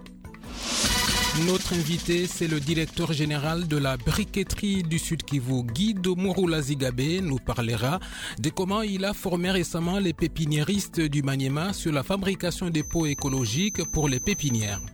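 A feedback whistle creeps in from 12.70 s to the end: a thin, steady 6.2 kHz tone sitting roughly ten decibels under the audio, swelling and fading slowly, likely a speaker-to-mic loop right at the edge of feedback.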